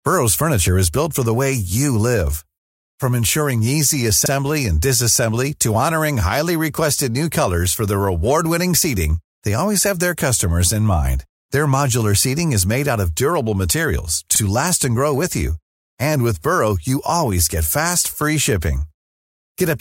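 At 4.26 to 4.31 s, right after "ensuring easy", and again at 14.36 to 14.40 s, after "out of durable materials", there's overlapping chunks: the audio was handled in 5-second pieces that overlap, so about 48 ms plays twice at each join, giving a quick stutter.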